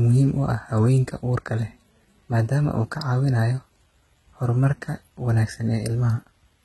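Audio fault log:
Throughout, HE-AAC compression: sibilants come out gritty, metallic and lisping, with nothing at all above 11.8 kHz and heavy damage across the whole speech clip. The likely cause is an HE-AAC encode at a rate that fits roughly 16 kbps, where only the lower spectrum is truly coded and the upper band is rebuilt from copied lower bands, so its harmonics no longer line up with the real voice.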